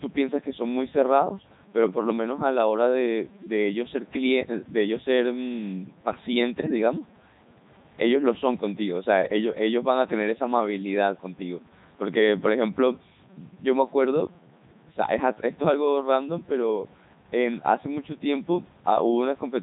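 A speech recording carries two faults from start to finish. The voice comes through a Codec 2 vocoder. It sounds robotic and buzzy, because the decoder rebuilds it from sine waves using only pitch, voicing, energy and a spectral envelope. The original waveform is gone. The damage is heavy. Nothing is heard above 3.8 kHz, and the character fits Codec 2's highest mode of 3.2 kbit/s. A grainy distortion also rides on the voice and shifts as the sound changes. It sits roughly 30 dB below the signal. Quiet passages turn gritty, and the softest moments break up or sputter between levels. The likely cause is low bit depth without dither, with samples truncated instead of rounded. The grain fits about 8 bits.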